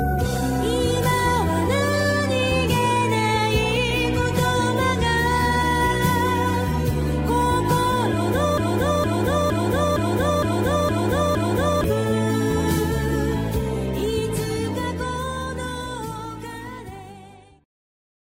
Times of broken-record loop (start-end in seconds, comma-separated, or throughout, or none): 8.58-11.84